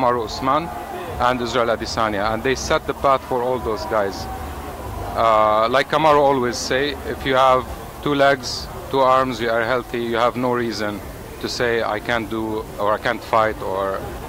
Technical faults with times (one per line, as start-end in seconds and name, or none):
none